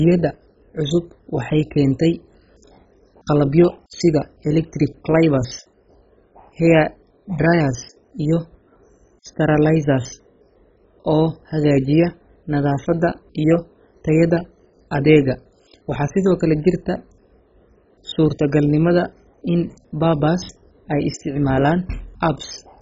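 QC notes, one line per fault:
Throughout: MP2 compression, likely from a very low bitrate around 16 kbps, leaves the speech dull and gurgling, with granular, heavy codec damage as starved sub-bands flicker and coarsely quantise; a spectrogram shows nothing above 7.5 kHz and patchy, blocky upper bands.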